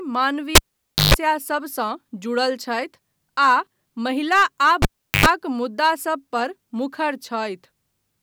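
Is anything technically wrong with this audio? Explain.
Yes. At 0.55 to 1.14 s and again at 4.82 to 5.26 s, the cable is pulled and plugged in. Each time a pop cuts the speech to near silence, for about 0.54 s and then 0.39 s. As the plug goes back in, the tip touches before the ground sleeve seats, letting in a 50 Hz mains buzz for about 0.14 s and 0.09 s, and a second pop brings the sound back. That buzz between the two pops sets it apart from a plain dropout.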